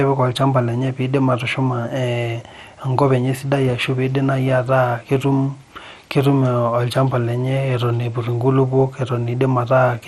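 Speech carrying MP2 compression throughout, likely from a low bitrate near 64 kbps: dull, gurgling granularity from flickering sub-bands, with nothing above 13.6 kHz, unlike a clean low-pass.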